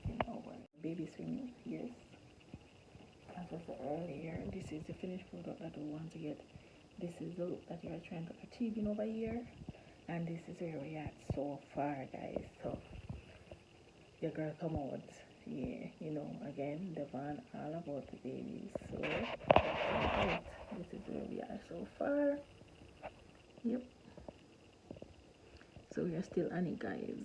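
No technical faults can be heard anywhere in this recording.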